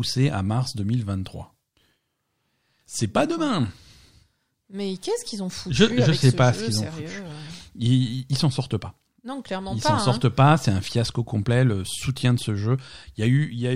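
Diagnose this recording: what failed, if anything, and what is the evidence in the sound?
Nothing failed: no stage of the chain leaves any audible fault in the speech.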